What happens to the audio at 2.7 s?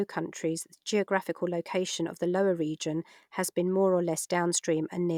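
Nothing goes wrong at 2.7 s; the speech runs through that moment intact, with no dropout, click or other fault.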